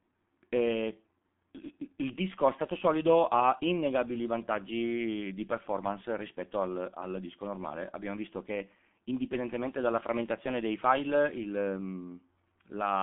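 From start to finish the speech carries G.723.1 codec damage, and it is heavy. The sound is confined to roughly 150 Hz to 3.5 kHz, giving a dull, muffled tone, and the codec's slowly updated voice model leaves vowels hoarse and consonants smeared, which fits a bitrate around 6 kbit/s. Simple band-limiting would stay clean inside the band; here the hoarse, blurred texture marks a coarse low-rate speech coder.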